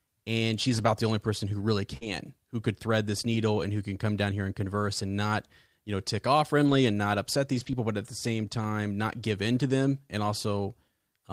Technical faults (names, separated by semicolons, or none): lost packet rebuilt from error correction; short concealed packet loss